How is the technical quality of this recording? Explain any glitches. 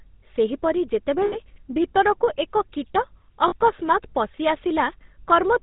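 The recording is telephone-grade speech with plainly audible codec damage throughout and three brief dropouts.

GSM full-rate codec, throughout: the sound is rebuilt from a vocal-tract model driven by sparse, regularly spaced pulses, with nothing above 4 kHz. That gives the buzzy, gravelly roughness heard in the voice, consistent with a 13 kbps full-rate stream.

Lost GSM frames at 1.26–1.36 s, 3.48–3.55 s and 5.06–5.09 s: during each gap of roughly 60, 40 and 20 ms, the decoder repeated the last good frame, so the sound briefly hangs in a rough, metallic ring before speech resumes.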